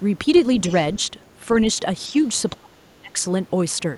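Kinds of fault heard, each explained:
Other side's voice leaking through: a faint second voice at 0.7 s, well under the speech, likely uncancelled loudspeaker echo; something added, not something lost.
Speech suppressed in double talk: speech dips slightly near 2.1 s and nearly drops out from 2.56 to 3.19 s, likely echo-canceller ducking; sound lost, not added.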